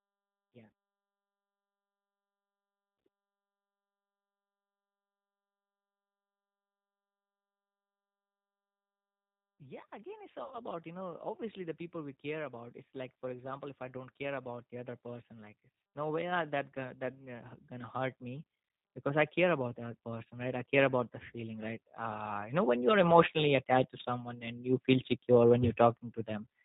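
Throughout, the G.729 codec rebuilds the speech from a vocal tract filter and a few pulses per frame, consistent with an 8 kbit/s coder. Everything above 4 kHz is gone, and the voice sounds plainly rough and synthetic.

From 9.58 to 18.49 s, automatic gain rising: the gain control judged the input too quiet and slowly raised it by about 16 dB, so voice and background swell together.

From 10.44 to 10.57 s, VoIP packet loss concealed by the speech codec: about 70 ms of audio went missing. The decoder extended its last pitch and filter, stretching the sound into a fading buzzy tone or coloured noise before the voice recovers.

From 19.04 to 24.35 s, just before "and you", a second automatic gain rising: the gain control again lifted the level gradually by about 10 dB, and the whole sound grows steadily louder.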